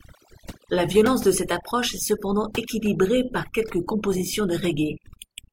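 From start to finish the speech carries overdone noise removal. An aggressive noise reducer has pushed individual frequency bands far down whenever their level sat close to its noise estimate, taking the softer parts of the voice along with the noise. Pauses fall to near silence dotted with twinkling specks. On a spectrogram the gaps show as dark fields with scattered isolated bright dots, and the speech harmonics look patchy and eaten away.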